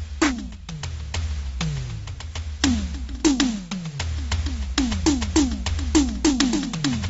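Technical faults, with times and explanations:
Throughout, AAC compression: the music sounds dull and smeared, with nothing above 7.7 kHz and a warbling, fizzy texture on sustained tones. The likely cause is AAC-LC coding at a low bitrate, which fits about 24 kbps, cutting the top band and coarsely quantising the rest.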